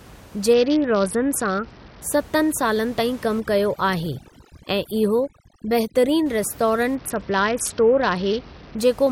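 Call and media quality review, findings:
Bluetooth SBC bit pool drop, 0.53–2.02 s and again 6.95–8.79 s: speech goes dull up top with gritty grain underneath. Looks like the BT link congested and the encoder starved high sub-bands, consistent with bit pool falling from 31 to 7, around 61 kbps.

Overdone noise removal, 3.40–6.26 s, right after "ताईं कमु": room noise (normally sitting about 22 dB under the speech) gets pulled down and breaks up into twinkly specks, and quiet parts of the speech go with it. Denoiser's too aggressive, so it's zeroing bands the speech shares with the noise.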